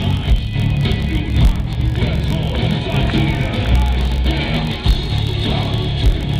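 Throughout the clip, a filter restarted on every block produces a buzz at about 46.9 Hz. The filter drops its memory at each block boundary and begins from silence, leaving a small transient whose spacing fits a 1024-sample block. The buzz rises and falls with the sound's level. The waveform shows evenly spaced spikes, and the spectrogram shows faint vertical lines with harmonics stacked at 46.9 Hz intervals.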